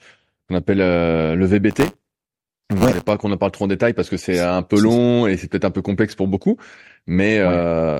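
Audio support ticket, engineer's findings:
Buffer tearing, 1.70 to 3.13 s, after "qu'on appelle euh le" and clearing before "qu'on en parle trop". Robotic 100 Hz buzz riding the speech. Points to the playback ring buffer. Writer and hardware read pointer have slipped and cross each period. A small slice of each period, roughly a twentieth, replays audio about 20 ms stale. Hard edges both sides. Rate fits a 10 ms period.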